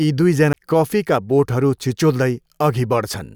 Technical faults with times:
0.53 CD skip

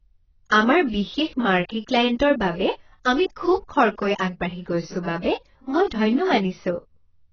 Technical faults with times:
0.00-7.32 AAC compression

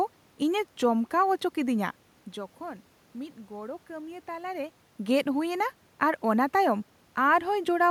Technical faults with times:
none

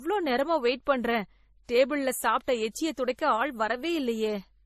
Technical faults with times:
0.00-4.65 transcoding between lossy codecs

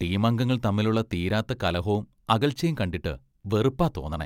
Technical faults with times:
none

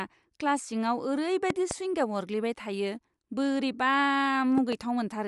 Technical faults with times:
0.00-5.27 Bluetooth LC3 compression
1.50-1.73 loud pop
4.58-4.75 loud pop

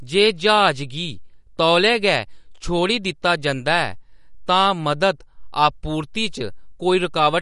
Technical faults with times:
0.00-7.42 MP3 compression

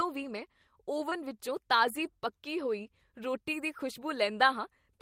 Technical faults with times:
1.09-1.13 short concealed packet loss
1.11-1.13 lost packet rebuilt from error correction
2.05-2.07 lost packet rebuilt from error correction

